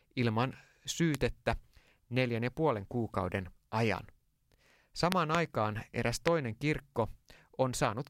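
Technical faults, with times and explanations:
1.15–1.17 s, 5.12–5.37 s (a double pop) and 6.28–6.30 s: loud pop, about 20 dB above the speech, likely a voltage spike; the speech continues underneath, with no gap.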